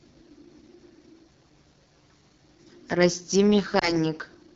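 Throughout the speech there is a rough, raspy texture, which points to AMR wideband (HD Voice) coding at a low rate, around 8.85 kbit/s, where the vocal-tract model struggles. At 3.79 s a brief dip or warble occurs, then the sound returns weak or rough for a moment until 3.97 s. A single lost AMR speech frame of 20 ms was concealed by repeating the previous settings at reduced gain.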